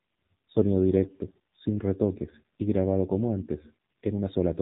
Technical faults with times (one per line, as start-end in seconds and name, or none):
0.00-4.62 AMR narrowband mobile codec